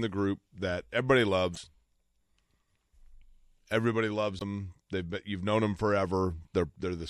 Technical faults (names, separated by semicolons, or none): MP3 compression; damaged data in a compressed stream